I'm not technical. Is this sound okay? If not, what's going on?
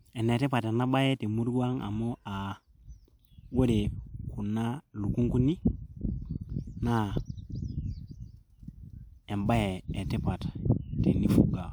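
Yes, this one's fine: nothing in it is glitching, dropping out or misbehaving, so there's nothing to worry about.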